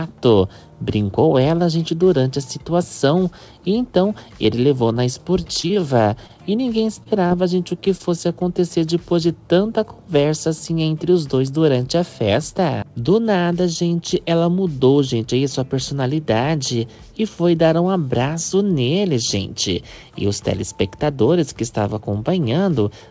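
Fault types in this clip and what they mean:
Repeated packet loss (robotic sound): two choppy stretches, 4.88 to 6.31 s and 7.03 to 8.01 s, where short dropouts up to 26 ms keep getting papered over by stretching the last bit of sound, giving a clipped, robotic texture over the 8 kHz-limited call audio.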